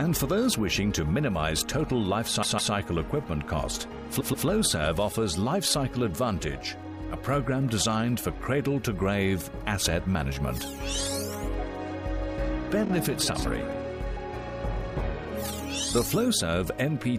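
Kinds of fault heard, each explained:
Repeated frames: the decoder plays the same run of encoded audio three times over, a 157 ms block at 2.42 s, 131 ms at 4.19 s and 26 ms at 12.84 s. Unlike a dropout, nothing goes missing, and each stutter lengthens the clip.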